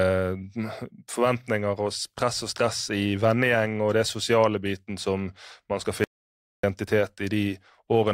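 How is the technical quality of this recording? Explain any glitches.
The speech cuts abruptly to dead silence from 6.04 to 6.63 s, right after "biten som man skal", then resumes mid-flow. This audio dropout to silence leaves no room tone, only silence for about 0.59 s, likely from a momentarily lost input or link, and whatever was said then is gone.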